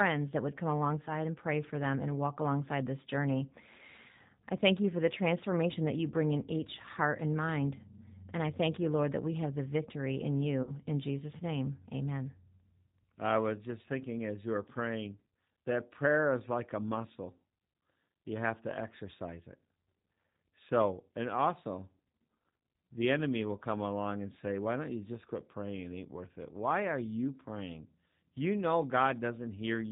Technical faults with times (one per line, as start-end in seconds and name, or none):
0.00-29.92 G.729 codec
1.05-1.11 VoIP packet loss concealed by the speech codec
10.63-10.72 VoIP packet loss concealed by the speech codec